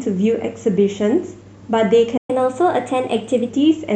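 At 2.17 s the speech cuts out mid-flow and stays silent until 2.30 s, a gap of about 120 ms. This is a playback stall, likely caused by the player running short of buffered data or having its output thread blocked. From 2.30 s to 3.50 s the speech runs quick and slightly high, at 1.1 times normal speed with pitch raised by about a semitone and a half, then settles back. This is catch-up at higher speed: the player resamples its backlog faster to recover the time lost in the stall.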